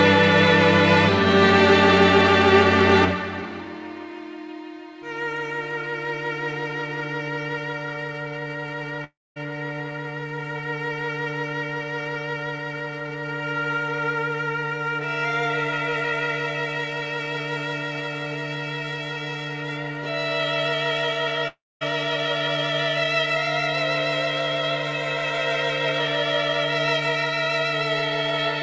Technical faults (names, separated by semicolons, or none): long network dropout